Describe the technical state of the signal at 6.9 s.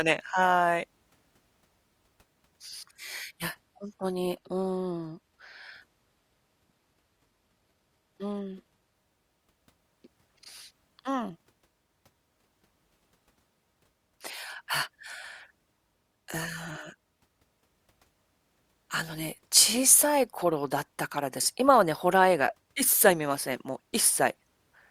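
At 6.9 s the speech has lost its top end, with nothing above 14.9 kHz, and codec artefacts are more prominent. The change arrived abruptly at 2.94 s with no gap and lasts until 8.94 s. This is an adaptive stream at a lower bitrate, consistent with a switch from AAC near 96 kbit/s to HE-AAC near 24 kbit/s.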